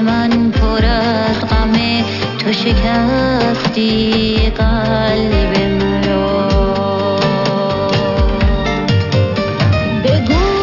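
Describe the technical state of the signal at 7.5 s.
At 7.5 s, aliasing runs through the whole clip: content above 6 kHz folds back as gritty, metallic tones, consistent with downsampling to 12 kHz. A spectrogram shows mirrored energy packed hard up to 6 kHz.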